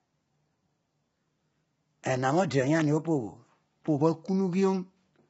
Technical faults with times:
0.00-5.29 low-delay AAC compression

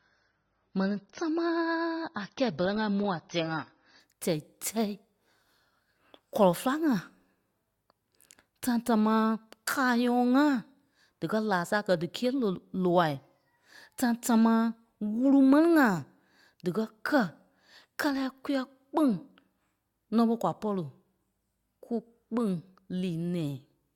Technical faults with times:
0.00-4.00 adaptive stream starting at a low bitrate

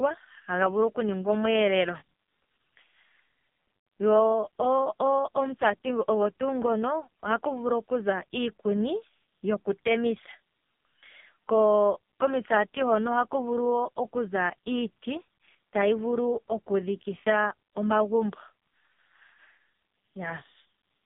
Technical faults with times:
0.00-21.05 AMR narrowband mobile codec

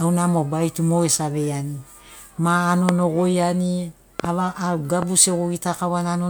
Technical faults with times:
2.89-2.91 loud pop
4.20-4.27 loud pop
5.02-5.04 loud pop

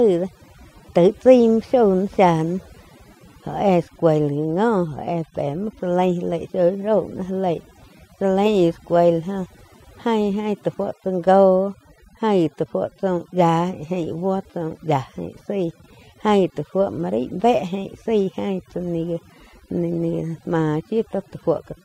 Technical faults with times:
0.00-21.85 overdone noise removal

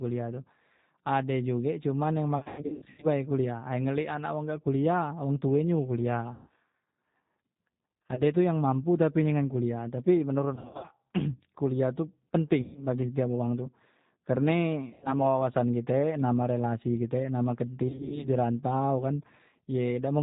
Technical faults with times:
0.00-20.23 G.729 codec
2.38-3.07 VoIP packet loss concealed by the speech codec
6.33-6.49 VoIP packet loss concealed by the speech codec
8.04-8.21 VoIP packet loss concealed by the speech codec
10.55-10.94 VoIP packet loss concealed by the speech codec
12.61-12.82 VoIP packet loss concealed by the speech codec
14.90-15.15 VoIP packet loss concealed by the speech codec
17.88-18.29 VoIP packet loss concealed by the speech codec

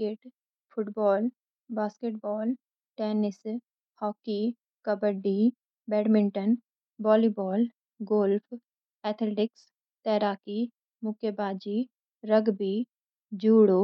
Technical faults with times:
none

